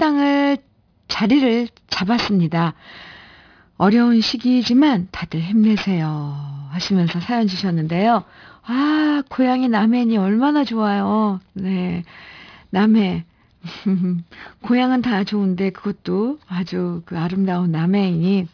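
Aliasing runs through the whole speech clip. The sample rate appears to have been cut to about 11 kHz, likely from 44.1 kHz, with no anti-alias filter beforehand, so content above the new 5.5 kHz limit folded back into the band at false, unrelated frequencies. Sibilants come out gritty and metallic, the top end stays dense right up to 5.5 kHz, and the folded components sit roughly 20 dB under the speech.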